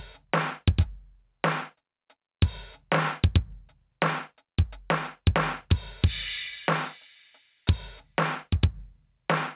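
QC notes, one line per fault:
Throughout: gain pumping. The gain ducks by around 5 dB under every loud sound. Loud and soft passages sit squashed together. The likely cause is input gain set far too high, with a fast limiter pulling down each peak.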